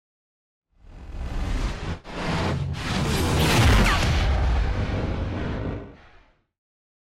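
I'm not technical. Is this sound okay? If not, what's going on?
Yes, listening closely, nothing in this sound stood out as a problem.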